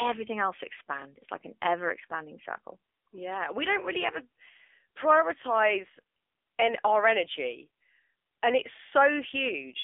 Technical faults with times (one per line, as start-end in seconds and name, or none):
0.00-9.84 AMR narrowband mobile codec